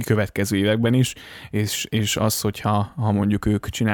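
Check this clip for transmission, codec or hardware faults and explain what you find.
Listening closely to the speech, nothing stood out as a problem.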